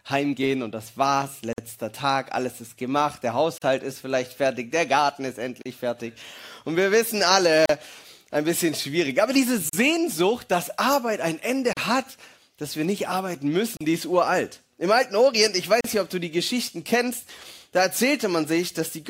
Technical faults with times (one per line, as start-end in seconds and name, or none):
1.53-1.58 gap at a join of encoded pieces
3.58-3.62 gap at a join of encoded pieces
5.62-5.66 gap at a join of encoded pieces
7.66-7.69 gap at a join of encoded pieces
9.69-9.73 gap at a join of encoded pieces
11.73-11.77 gap at a join of encoded pieces
13.77-13.81 gap at a join of encoded pieces
15.81-15.84 gap at a join of encoded pieces